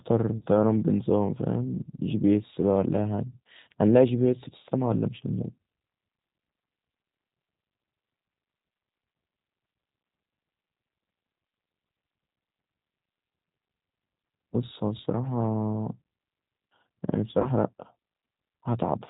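The G.729 codec runs through the whole recording. The speech has been squeezed through a low-rate model that keeps only a vocal tract shape, a pitch estimate and a few excitation pulses per 10 ms frame, which fits an 8 kbit/s G.729A stream. The damage is plainly audible: nothing above 4 kHz survives, so the speech sounds band-limited and dull, with a rough, slightly synthetic grain.

VoIP packet loss concealed by the speech codec appears first from 0.37 to 0.44 s. About 40 ms of audio went missing, which fits two lost packets, and the decoder filled the gap by repeating its last pitch and filter settings at falling gain. This is heard as a brief stretched buzzy tone or coloured noise that fades rather than a clean dropout. A second, shorter gap of about 20 ms from 17.42 to 17.48 s points to a single lost packet and gives the same smeared fade, with the sound staying weak or distorted just after it.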